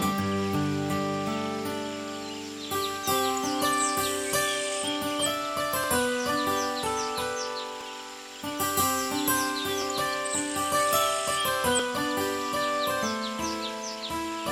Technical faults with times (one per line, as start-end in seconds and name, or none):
5.84 overlap between stream segments
7.81-7.84 overlap between stream segments
9.82-9.84 overlap between stream segments
11.79 overlap between stream segments